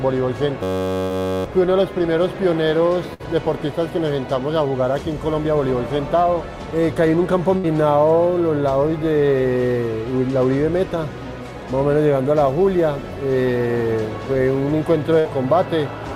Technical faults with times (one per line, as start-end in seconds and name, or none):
0.63-1.44 system hang loop
1.03-1.13 burst of packet loss
3.14-3.22 burst of packet loss
7.57-7.66 burst of packet loss
15.19-15.28 burst of packet loss